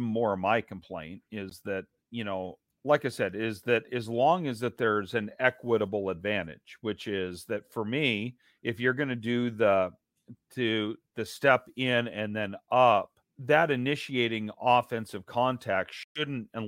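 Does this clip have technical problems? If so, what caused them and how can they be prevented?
Yes. Bluetooth dropouts at 1.50 s, between "my complaint" and "that you know like", and at 16.03–16.27 s cut the sound abruptly, likely because late packets were dropped. Playback then resumes further on. Keeping the headphones close to the source, with a clear path and little other 2.4 GHz traffic, prevents this.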